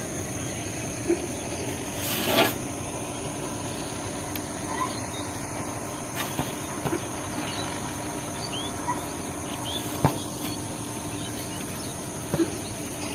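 Nothing in the signal points to a technical fault at any point in the recording.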